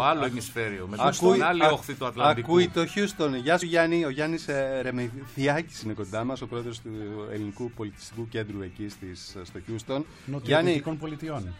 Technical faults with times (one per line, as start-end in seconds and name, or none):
3.61 damaged data in a compressed stream